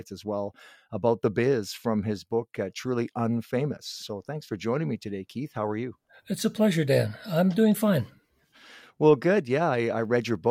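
No dropouts, clipping, distortion or timing errors are audible anywhere in this speech recording.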